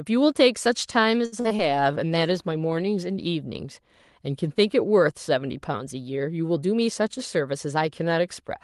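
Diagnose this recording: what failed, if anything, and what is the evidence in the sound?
Repeated packet loss (robotic sound), 1.25–1.61 s, network stage: four gaps, the longest 69 ms, are patched by extending prior sound, leaving choppy speech with pieces missing.

Call bitrate drop, 1.63–3.93 s, codec stage: the speech turns rough and watery, lowest for 1.2 s, which fits Opus falling from 32 to 17 kbps.

Jitter buffer speed-up, 7.01–8.51 s, buffer stage: speech runs about 4% fast at unchanged pitch as the receiver trims roughly 70 ms of pitch periods.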